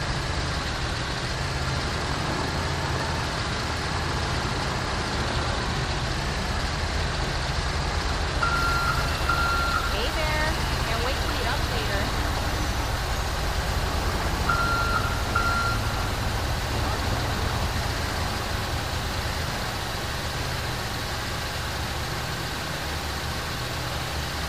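The audio jumps and garbles from 2.6 to 3.2 s and again from 6.6 to 7.0 s. These are chunks out of order: 200 ms blocks arrived late (two blocks late, then one) and play after material that should follow them, leaving hard joins. From 8.56 s to the end at 24.48 s, a distortion sits on everything and quiet passages fill with noise. The likely cause is a stuck bit, a single data bit frozen at one value that throws off roughly half the samples.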